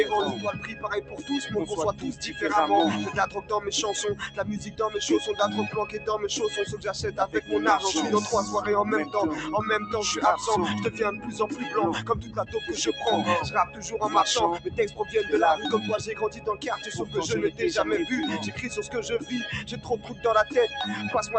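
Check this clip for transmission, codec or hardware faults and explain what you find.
Yes, there is one fault: a speech-style noise suppressor is working on non-speech sound and repeatedly pulls sustained passages down. The call path shows its Opus band limit at 8 kHz, which fits roughly 40 kbps.

Noise suppressor applied to music or sounds, throughout: the suppressor treats steady tones and tails as noise, so the level swings by around 10 dB. The waveform envelope pumps while the onsets stay intact.

Sound cut by the noise suppressor, at 0.37–2.21, 3.27–4.80, 5.86–7.51, 10.91–12.55, 13.65–15.15, 16.12–17.60 and 18.55–20.24 s: held portions and decays sink by about 8 to 10 dB, for roughly half a second or more in each span. On a spectrogram, sustained energy fades early while attacks remain bright.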